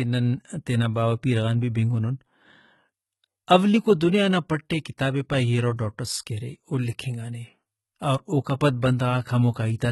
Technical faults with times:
0.00-9.91 HE-AAC compression

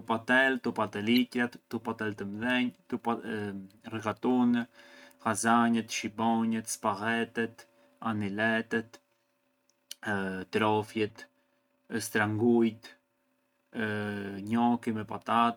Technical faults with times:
1.16 corrupt frame decoded
11.08-11.11 corrupt frame decoded

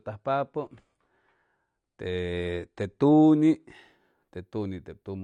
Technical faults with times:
0.00-3.74 adaptive stream starting at a low bitrate

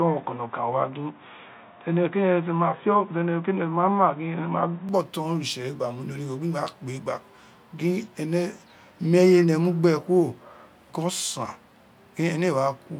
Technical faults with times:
0.00-4.89 input switched to a poorer device

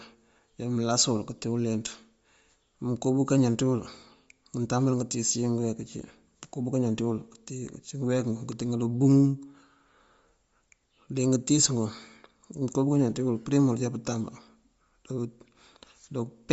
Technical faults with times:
0.00-16.52 Bluetooth LC3 compression

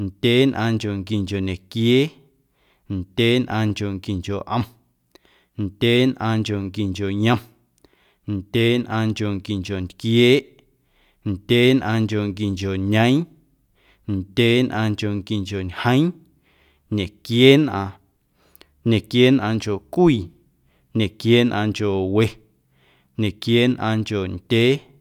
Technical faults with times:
none

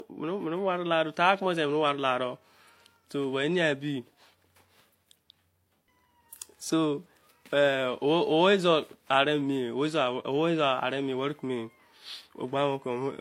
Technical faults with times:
0.00-13.20 transcoding between lossy codecs

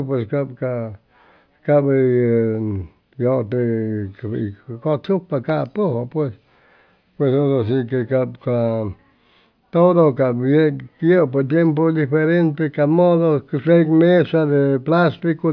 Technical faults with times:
none

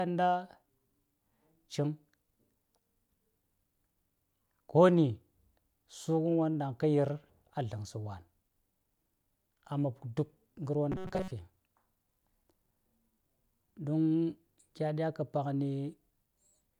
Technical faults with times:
10.92-11.34 robotic sound from repeated short buffers

